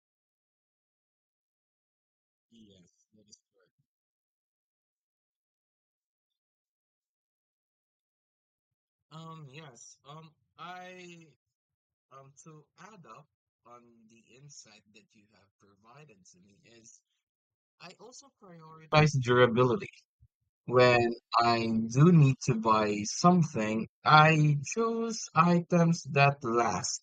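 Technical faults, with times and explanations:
0.00 to 18.92 s, one channel inverted: the speech nearly vanishes, about 30 dB quieter than the rest, with its centre almost gone, leaving only a faint residue that returns to full body at 18.92 s. The likely cause is one stereo channel with flipped polarity, so the speech, common to both sides, cancels when they are summed to mono, and only the small difference between channels survives.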